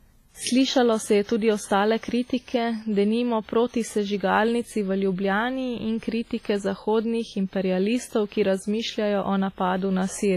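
From start to finish the speech carries heavy transform-codec damage, likely from WMA compression at a low bitrate, with the sound pointing to around 24 kbps. Quantisation noise smears across tens of milliseconds around each sound, giving a ringing, washy quality and a hiss that rises and falls with the signal, while weak spectral detail drops out and nothing remains above 15.4 kHz. That breathing, smeared noise sets it apart from a plain low-pass filter, which would dull the top without the washy hiss.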